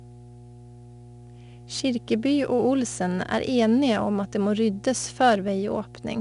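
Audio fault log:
Throughout: mains hum. A steady 60 Hz tone sits under the speech at about 20 dB below the signal, as if a ground loop or nearby transformer were bleeding the power line into the chain. On a spectrogram it shows as a constant horizontal line at 60 Hz, with some low harmonics above it.
Throughout: 4-bit ADPCM compression. Each sample is coded as a coarse 4-bit step from a prediction, so a gritty hiss rides on every loud syllable and sharp onsets distort. The bitrate points to roughly 88 kbps. A spectrogram shows noise tracking speech energy and nothing above 10.6 kHz.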